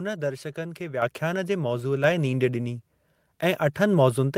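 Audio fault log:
1.02 s and 2.04 s, microphone volume stepped up: the level jumps abruptly, by about 7 dB and then about 4 dB, as the device input volume is raised in single steps. Speech and background noise rise together and stay up, unlike a gradual gain ramp.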